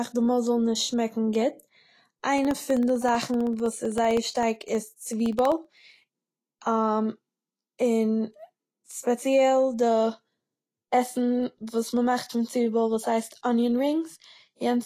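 Throughout the speech, the treble is coarsely quantised and nothing remains above 14.2 kHz, giving a plainly audible hissy, grainy texture and roughened tones. This is likely Vorbis compression at a low bitrate, which fits about 32 kbps, where fine spectral detail becomes noise.

From 2.38 to 6.03 s, periodic USB or driver dropouts occur every 64 ms, about fifty in total. Each time, roughly half a millisecond of audio is replaced by silence, because something blocks the audio path at a fixed interval. The result is a regular train of ticks.

At 8.84 s, pre-echo precedes an attack, spreading over 51 ms until 8.89 s. The codec's quantisation noise, sized for the loud attack late in its block, fills the quiet moment before it. This is heard as a short hiss leading into a softened, smeared onset.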